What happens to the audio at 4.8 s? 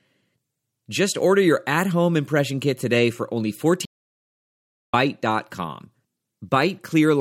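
At 4.8 s the audio is inside a playback stall from 3.85 to 4.94 s, most likely the player running short of data or its thread being blocked. The speech cuts off mid-flow and falls silent for about 1.08 s, then resumes.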